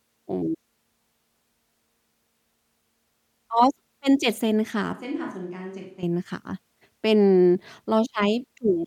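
A short speech recording has one clear fault: a switch to a distant microphone from 4.93 to 6.03 s. For that stretch the sound turns hollow and roomy, thinner in the bass and about 10 dB quieter, with room noise roughly 35 dB below the speech. The likely cause is that the close mic dropped out and a farther one took over. On a waveform the envelope steps down abruptly. A spectrogram shows weaker low frequencies, smeared reverberant tails and a raised noise floor, with hard edges at both ends.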